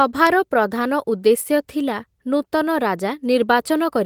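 Sharp ticks of uneven strength recur about once a second in the speech from 0.27 s to 3.21 s, roughly four in all. These are word clock ticks: the receiving clock runs around 20 ppm off the sender's, so each slip drops or repeats one sample.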